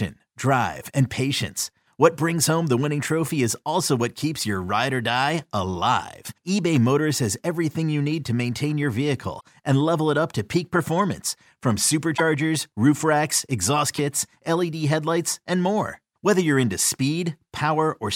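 At 9.39 s, 12.16 to 12.21 s and 13.96 to 13.99 s the speech skips ahead through a short chirp or noise burst, a broadband vertical smear on a spectrogram and a jagged break in the waveform. The likely cause is a broken MP3 bit reservoir: after 26.1 ms frames went missing, the next frame decoded another frame's bytes.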